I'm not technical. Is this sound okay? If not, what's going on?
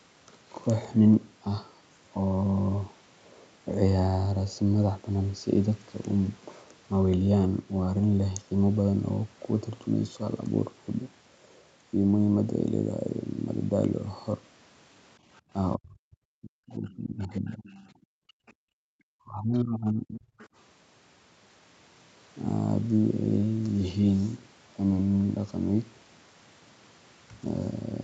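No. From 15.76 to 17.63 s and again from 19.14 to 20.32 s there is speech suppressed in double talk. Both ends were talking at once, and the call's echo canceller likely confused this voice with the loudspeaker, so it pushed it down hard, close to silence at its worst.

The other side's voice is leaking through in four short scraps, at about 17.64, 18.48, 19.57 and 20.39 s. Each lasts under a tenth of a second. This is likely the far end's voice from the loudspeaker getting back into the microphone, faint and quieter than the main talker.

From 17.92 to 18.86 s, about a second, the background is gated by the echo canceller. While the loudspeaker played, the canceller shut the microphone down almost completely, so the room sound drops out and then returns once it releases.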